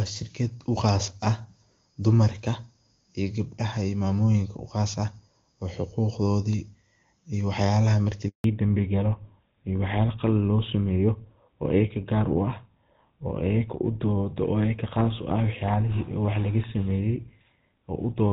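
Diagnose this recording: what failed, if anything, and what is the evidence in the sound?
A handover gap at the network stage cuts the speech at 8.28 s, and the signal stays silent until 8.44 s, a hole of 160 ms. The sound fades out within a few tens of milliseconds, which points to frames simply not arriving while the call moved from one network to another. Whatever was said inside those 160 ms is gone, since nothing was delivered to decode.

Fallback to narrowband follows at the codec stage from 8.44 s to the end. Before the gap the speech carries wideband content with faint or no coding damage, which fits AMR-WB at around 23.85 kbit/s. After it, nothing above 4 kHz remains, and the speech sounds duller and rougher. That is consistent with the new link negotiating an older narrowband codec such as GSM full rate at 13 kbit/s, which cannot code the upper band at all.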